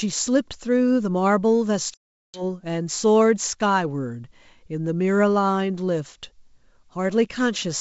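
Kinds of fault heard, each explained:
Packet loss on an ADPCM call: a run of packets, around twenty of them, never reached the decoder, and about 400 ms of speech was replaced with silence, leaving a hard-edged hole from 1.94 to 2.43 s. ADPCM decodes each sample as a predicted change from the last, so during the gap the receiver's predictor and step size drifted away from the sender's. The speech therefore resumes slightly distorted, before resynchronising within some tens of milliseconds.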